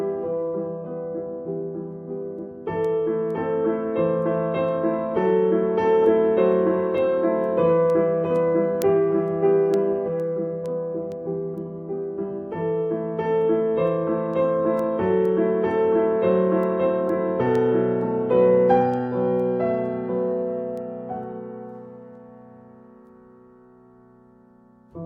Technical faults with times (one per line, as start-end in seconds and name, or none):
0.55-24.91 word clock ticks